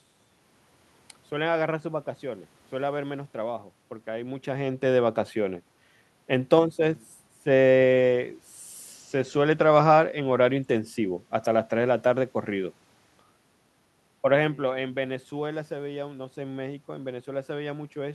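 No technical faults can be heard in this speech recording; the background room noise and the level shifts as the talker moves around 4 and 14 seconds come from the recording itself.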